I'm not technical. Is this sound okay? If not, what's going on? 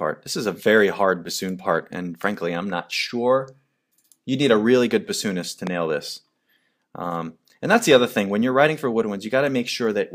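No, there's one glitch. At about 5.67 to 5.69 seconds you'll hear a loud pop: a single sharp crack, noticeably louder than the audio around it, lasting only a split second while the sound keeps going underneath. It's the kind of thing that happens when a sudden electrical jolt sneaks into the signal, most likely from a cable being bumped or plugged in, a switch being flipped, or a bit of static.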